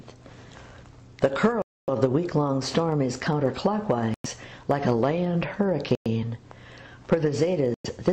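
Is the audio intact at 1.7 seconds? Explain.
No. At 1.7 seconds the sound has dropped out. From 1.62 to 1.89 s there is a gap of about 260 ms of silence, then playback resumes. This is likely a Bluetooth stall: interference delayed packets, the headphone buffer emptied, and output paused until retransmissions arrived.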